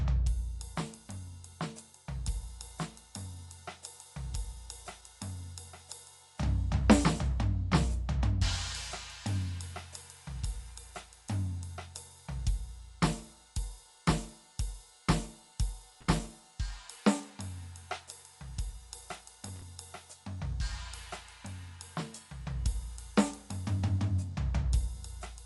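Right from the start the music sounds dull, with nothing above about 11.5 kHz and a rough, fluttery noise hanging around sustained tones. That's likely Dolby Digital compression at a low rate, fitting something like 64 kbps, where many frequency lines get no real bits and are filled in with noise. Then at 16.01 to 16.25 s, and again at 19.48 to 19.62 s, you get short, irregular bursts of scratchy crackle. That's loose connector crackle: a worn or dirty contact rapidly making and breaking, chopping up the signal.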